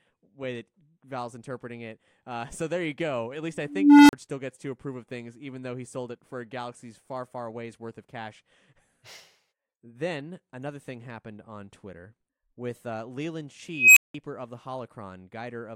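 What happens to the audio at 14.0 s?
An unstable filter: a recursive filter's feedback runs away between 13.72 s and 14.14 s, and its output grows without bound. A squeal around 3 kHz swells over 249 ms into hard clipping, then numeric overflow cuts the speech to silence for 180 ms.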